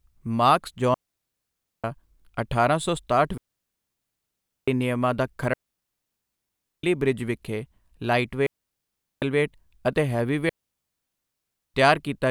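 Digital wireless dropouts cut this speech clip at 0.94–1.84 s, 3.38–4.68 s, 5.53–6.83 s, 8.47–9.22 s and 10.49–11.74 s, each a clean near-silent hole of 0.75 to 1.3 s. The receiver lost too much data and muted with a very short fade, leaving no noise burst on either side.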